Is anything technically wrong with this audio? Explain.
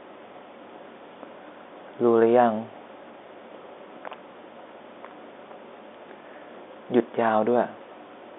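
No, nothing in this speech clip is technically wrong. It carries the narrow band of G.711 telephone coding, roughly 250 Hz to 3.6 kHz, which fits a 64 kbps A-law line, and any quantisation noise from that coding stays faint under the voice.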